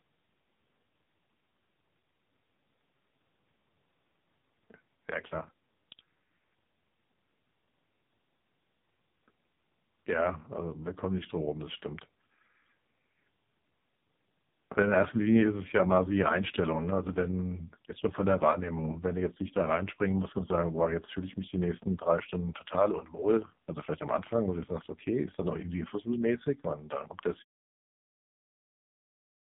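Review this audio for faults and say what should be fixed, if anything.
AMR narrowband mobile codec damage runs through the whole speech clip, up to the smooth fade-out near 27.5 s. Nothing passes above 3.8 kHz, and heavy buzzy, synthetic coding fits AMR-NB's lowest 4.75 kbps mode. To prevent it, record or transfer the speech over a wideband or uncompressed path instead of a narrowband mobile link.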